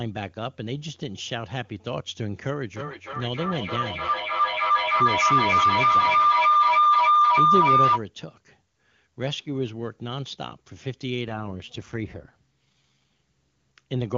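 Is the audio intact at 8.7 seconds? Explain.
Yes, at 8.7 seconds the speech is intact, carried cleanly by the AMR wideband (HD Voice) codec at 23.85 kbit/s with no fault at that moment.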